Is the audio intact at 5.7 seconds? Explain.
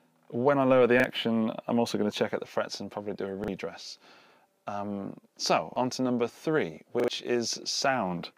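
No. From 5.72 to 5.76 s there is a quick stutter: a 40 ms fragment of sound plays twice in a row, with an abrupt, hard join where the repeat begins. This is a repeated buffer. Fresh audio did not reach the playback device in time, so it replayed the last 40 ms block once more instead of going silent. That replay stands in for roughly 40 ms of audio that never gets heard.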